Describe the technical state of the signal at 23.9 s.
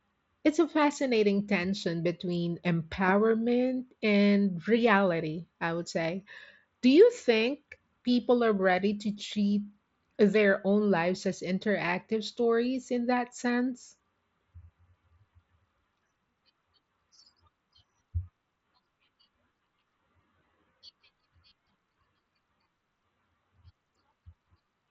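Around 23.9 s the audio is intact, with no fault at that point.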